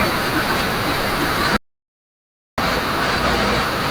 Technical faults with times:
1.57-2.58 audio dropout to silence

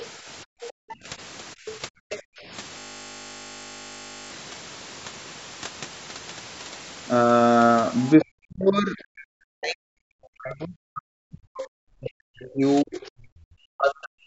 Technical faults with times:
0.45-0.99 background gated by the echo canceller
0.68-0.95 other side's voice leaking through
1.55-2.46 background gated by the echo canceller
1.67-1.71 other side's voice leaking through
2.10-2.22 other side's voice leaking through
2.79-4.30 system hang loop
8.17-14.27 speech suppressed in double talk

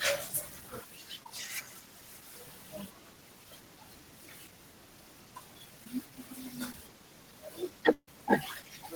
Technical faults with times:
1.23-1.26 short concealed packet loss
5.84-5.86 short concealed packet loss
6.71-6.74 short concealed packet loss
7.93-8.08 burst of packet loss

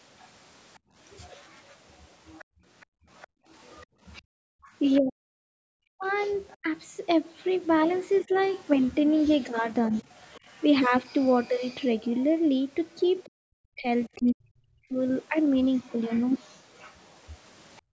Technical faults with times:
0.19-6.57 other side's voice leaking through
0.79-4.65 background gated by the echo canceller
5.00-6.66 speech suppressed in double talk
8.24-8.34 speech suppressed in double talk
9.62-14.09 other side's voice leaking through
13.27-14.98 speech suppressed in double talk
15.75-17.80 other side's voice leaking through
17.82-17.92 background gated by the echo canceller

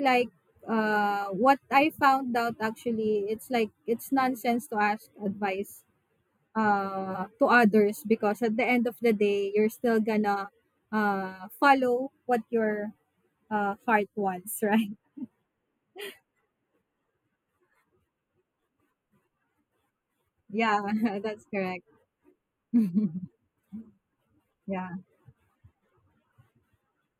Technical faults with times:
0.00-27.19 channel delay (comb filtering)

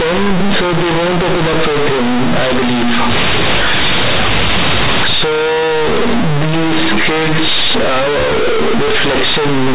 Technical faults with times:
0.00-9.75 companded audio read as linear

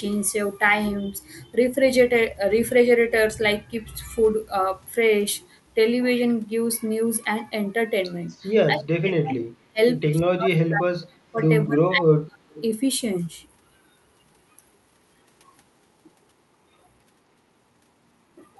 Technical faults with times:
8.28-8.45 echo leak
8.72-9.79 speech suppressed in double talk
10.16-12.56 speech suppressed in double talk
12.55-12.63 echo leak

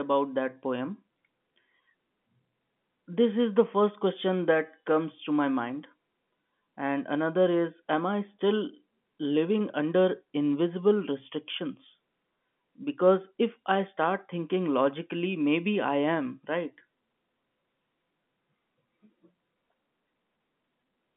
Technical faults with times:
none

